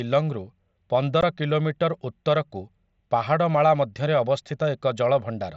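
At 1.21 s the speech drops out for about 15 ms, a case of unconcealed Bluetooth headset packet loss. Audio packets between headset and phone went missing, which fits two lost packets of 7.5 ms each, and nothing patched the gap, so it was filled with silence or an idle pattern. It sounds like a brief hole in the speech with abrupt edges. A waveform shows a short break with sharp edges, and a spectrogram a thin vertical gap across the mSBC band up to 8 kHz.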